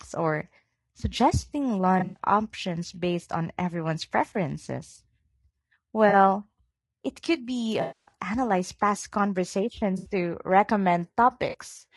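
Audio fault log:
Throughout: low-delay AAC compression. The speech is rough and grainy throughout, with a noisy haze between the harmonics and a thin, somewhat synthetic top band. This is likely AAC-ELD at around 32 kbps, whose short frames resolve pitch harmonics poorly. The damage is constant, unlike the brief patches below. No gaps open and nothing smears in time. The whole signal is simply coarsened.
1.99–2.18 s, 4.33–4.36 s, 6.09–6.14 s, 7.81–8.12 s, 9.97–10.10 s, 11.49–11.55 s: AAC frame loss with concealment. The shorter patches sound smeared, noisy or phasey. The decoder rebuilds the missing audio from the last good spectrum, so the gap is filled with a blurred copy rather than dropping to silence. The losses run from 20 ms up to 260 ms at 7.81 s, which fits 20 ms frames going missing. The 1.99 s patch is broken, with a longest run of about a tenth of a second. These local lapses set the fault apart from the steady compression grain.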